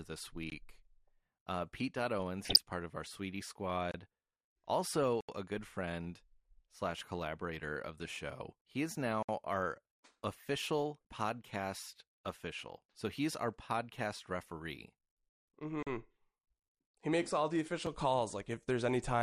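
The whole speech clip sounds dull and plainly gurgly. The top end is missing, and what remains has a granular edge. That points to MP2 compression, likely at a low rate around 80 kbps. Too few bits force the encoder to switch off upper sub-bands. The bands it keeps are coarsely quantised.

At 0.50 s comes a block of digital silence lasting 20 ms. The sound cuts out and returns with no fade, so it reads as a short hole.

From 2.43 to 2.59 s there is DAB burbling over the speech. Bit errors, at roughly 0.7%, slipped past error correction into the MP2 data. Corrupted samples put short blips of noise in single sub-bands. It spans only a handful of frames.

More dropouts follow. At 3.91 s there is a 27 ms hole. At 5.21 s an 80 ms gap is heard as a clear hole just before "a good friend slash". At 9.23 s a 60 ms gap sits just before "our official podcast official". At 15.83 s there is a 40 ms gap. 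At 17.86 s, right after "he makes all the", a 4 ms gap is just a tick. These blocks of zeros suggest output buffers that were not filled in time.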